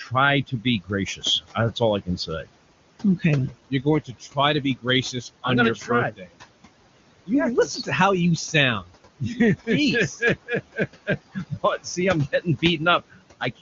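Throughout the recording, a noise suppressor is pulling down the bands it judges to be steady noise, cutting that background by about 20 dB frame by frame. These are noise suppressor artifacts: the room noise, which sits about 15 dB below the speech, drops away in the gaps and swells back underneath each phrase.

At seven points, speech cut by the noise suppressor occurs: the suppressor mistakes parts of the speech for noise and turns them down with the background, by between about 14 and 21 dB. The spans are 0.03 to 0.13 s, 0.47 to 2.55 s, 3.18 to 6.31 s, 7.26 to 7.89 s (ending just before "how you"), 8.53 to 9.68 s (starting just after "how you"), 10.2 to 11.98 s, and 12.32 s to the end. The affected syllables amount to around a tenth to most of a second within each span. Soft consonants and word endings in these stretches come across swallowed or faint, with the deepest drops, near 21 dB, between 0.47 and 2.55 s and between 10.2 and 11.98 s.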